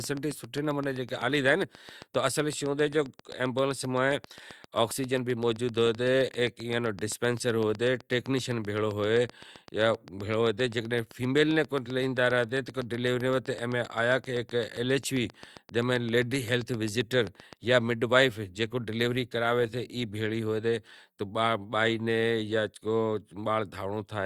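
A speech recording carries a train of clicks from 0.04 s to 17.54 s, ending just before "جاں مڈ وائیف": around 150 evenly spaced ticks at 7.66 per second, peaking roughly 5 dB above the speech. They show as regular vertical broadband stripes on a spectrogram and matching spikes on the waveform, likely interference from nearby equipment.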